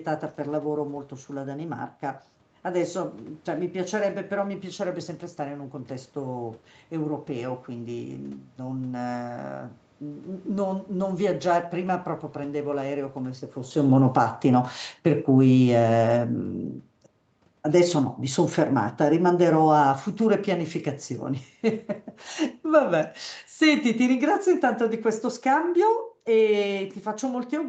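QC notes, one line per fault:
10.94–27.69 s, automatic gain falling: From 10.94 s the level sinks steadily to the end. The room noise drops along with the speech. The gain control judged the input too loud, or its background noise too strong, and lowered its gain gradually.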